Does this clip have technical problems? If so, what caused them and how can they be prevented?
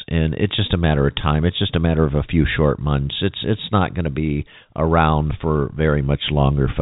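No, this clip does not have technical problems.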